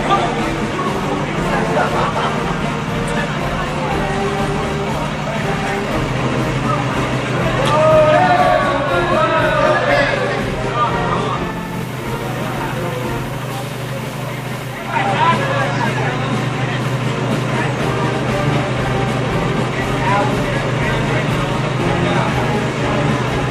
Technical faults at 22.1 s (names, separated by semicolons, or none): none